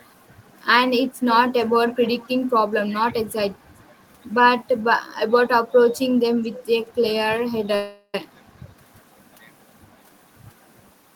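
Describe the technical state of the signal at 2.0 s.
At 2.0 s there's an echo leak from 1.88 to 2.33 s: a faint delayed copy of the speech, about 440 ms late, most likely loudspeaker pickup the echo canceller missed.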